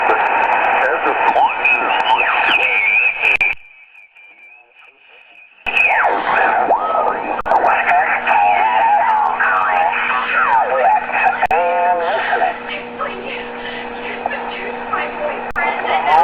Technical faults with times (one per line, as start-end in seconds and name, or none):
3.36-3.41 gap between chunks
3.53-5.67 one channel inverted
7.41-7.46 gap between chunks
11.46-11.51 gap between chunks
15.51-15.56 gap between chunks